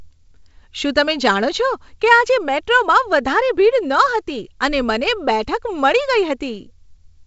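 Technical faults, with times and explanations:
Nothing stood out on listening to this speech clip.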